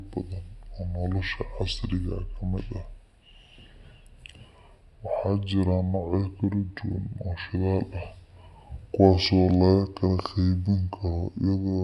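From start to finish the speech sounds low and slow, dragged down by about seven semitones and running at two-thirds speed. That points to a wrong sample rate: audio captured at 48 kHz is being played back at 32 kHz without any conversion.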